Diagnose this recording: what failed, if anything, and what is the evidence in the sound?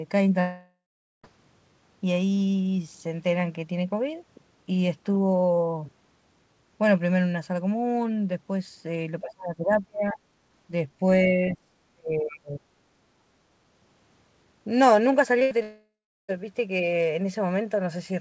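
Long network dropout, 0.40 to 1.25 s and 15.63 to 16.30 s. The network stage likely lost about 840 ms and 660 ms of speech. The receiver stretched the last sound into a fading fill, then left near-silence before speech resumed with that stretch gone.

Speech suppressed in double talk, 9.21 to 10.17 s and 11.22 to 12.65 s. The near talker's speech dips by about 30 dB. In the call-processing stage, the echo canceller likely mistook it for loudspeaker echo while both sides spoke.

Short concealed packet loss, 15.39 to 15.43 s. About 20 ms failed to reach the decoder in time. The receiver bridged it by extending the preceding sound and blending back, heard as a brief smear. It leads straight into the next fault.

Burst of packet loss, 15.43 to 15.53 s. About 80 ms of consecutive packets were lost in the network. Concealment held the last sound and faded it before audio resumed.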